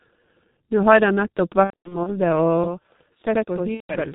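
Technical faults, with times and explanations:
Throughout: G.723.1 codec. The whole clip runs through G.723.1 at about 6.3 kbit/s, and it's heavily damaged. Nothing gets through above 4 kHz, so the speech sounds muffled. The codec also works in 30 ms frames and tracks the voice only slowly. That leaves a hoarse, rough edge on everything and smears the consonants, because fast changes between sounds land between model updates.
1.64 to 2.13 s: VoIP packet loss concealed by the speech codec. Around 240 ms of packets go missing, scattered over roughly 420 ms, and the longest gap is 90 ms. Over each gap the decoder keeps repeating its last pitch and filter settings at a falling gain, which gives a buzzy, fading tone in place of real speech. Each frame is built on the one before, so the voice stays weak and a bit warped for a moment after the packets return.
2.64 s to the end: channel delay (doubling). 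From here on, one channel trails the other by about 85 ms, which fits a 4096-sample buffer. The two channels are summed to mono, so the late copy comes through at full level as a distinct slap echo, and the speech sounds doubled instead of just thickened.
3.74 to 3.95 s: VoIP packet loss concealed by the speech codec. There's another dropout here, about 150 ms of lost packets. It gets the same treatment: a fading, buzzy extrapolation of the last frame, then a short stretch of weak, distorted voice while the decoder recovers.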